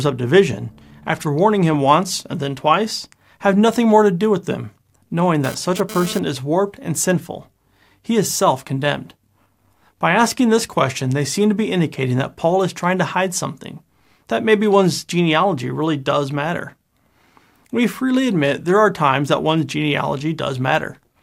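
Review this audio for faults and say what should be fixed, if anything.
There's a burst of GSM phone buzz from 5.44 to 6.19 s, a hard, raspy buzz at 217 Hz with a stack of harmonics sitting about 13 dB below the speech and having nothing to do with it. A 2G phone nearby was pulsing its transmitter and the audio circuit rectified those radio bursts. Because it comes and goes like this, it sounds like the phone was doing a data transfer rather than holding a call. Next time, keep phones well away from the rig or in flight mode while recording.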